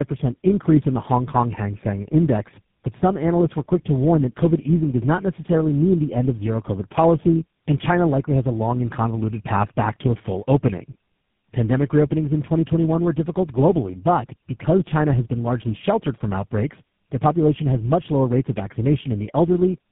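Tandem speech coding runs through the whole clip. The speech shows the compounded damage of being decoded and re-encoded several times in a row, which fits a path with three low-rate speech coders, GSM full rate, G.729A and GSM full rate again, linked by G.711 stages. Each model-based coder re-approximates the previous one's errors, so the voice comes out rougher, noisier, muffled and warbly, with nothing above 3.8 kHz.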